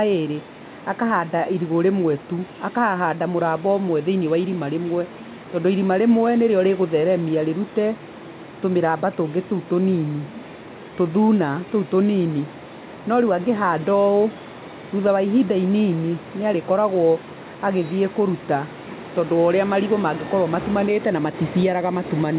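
Nothing stood out on listening to this speech, which comes over a call path whose telephone-band codec leaves nothing above 4 kHz.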